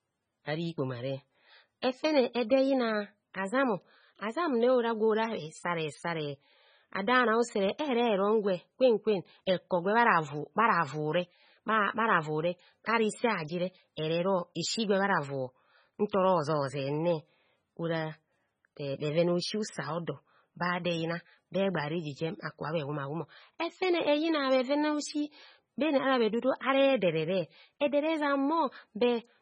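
MP3 compression runs through the whole recording, from start to finish, and the damage is heavy. Nothing is present above 9.3 kHz, so the speech sounds dull, and the sibilants come through as watery, metallic chirps while consonant onsets smear. The likely cause is an MP3 encoder starved of bits, which fits a bitrate around 16 kbps. It drops the treble at a fixed cut-off and zeroes weak frequency lines, which flicker on and off from frame to frame and give the swirling texture.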